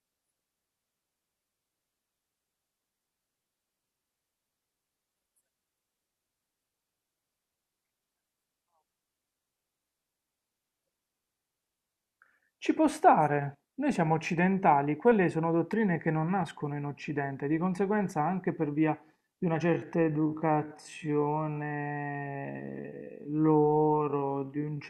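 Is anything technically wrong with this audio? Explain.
Yes, two faults stand out in this speech clip.

At 15.73 s there is an electrical switching spike: a sharp snap lasting only a few milliseconds, sitting on top of the speech. It was likely caused by a nearby switch, motor or static discharge arcing and coupling into the audio line. On a waveform it shows as a narrow, near-vertical spike on top of the surrounding speech; on a spectrogram, as a thin vertical stripe spanning the full frequency range.

From 19.64 s to the end, the audio is a time-stretched section. The pace abruptly drops to about 0.56 times normal speed while the pitch stays the same, so the speech sounds drawn out and dragging. This is likely the result of software lengthening the passage by repeating short slices rather than resampling. On a spectrogram, harmonics keep their spacing but syllables and gaps stretch horizontally.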